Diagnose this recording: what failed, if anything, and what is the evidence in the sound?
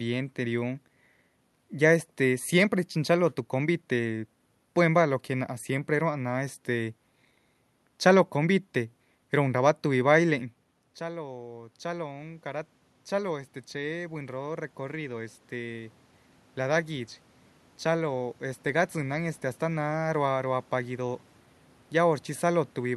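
Automatic gain rising, from 10.99 s to 19.41 s, in the call-processing stage. Just before 11 s the talker moves away and the level at the microphone falls by about 15 dB. The automatic gain control registers the quieter input and raises its gain slowly, by about 10 dB over roughly eight seconds. The room noise swells along with the speech, which shows that gain is being applied to the whole signal rather than the talker returning.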